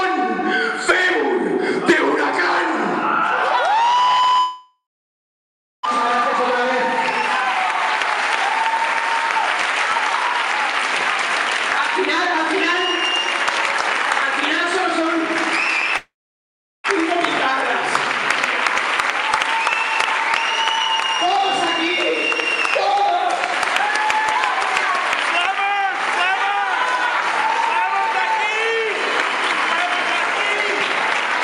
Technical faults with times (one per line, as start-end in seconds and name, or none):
4.39-5.87 long network dropout
15.97-16.90 long network dropout